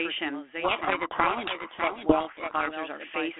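A doubled audio track runs through the whole clip: a second full-band copy of the speech trails the original by roughly 0.7 s, at about 5 dB below it. The trailing copy has no decay or room colouring, so it sounds like a clean repeat, not an echo. The likely cause is the same signal being captured twice, once through a slower path, and both captures being mixed together.

A codec payload misread runs from 0.64 to 2.74 s. The telephone-band G.726 stream (300 Hz to 3.4 kHz at 32 kbit/s, which carries only light coding damage) is decoded with the bit order of each code word reversed relative to how it was packed. Most adaptive-difference values are therefore wrong, and the speech is buried under harsh, gritty distortion until correctly ordered code words resume.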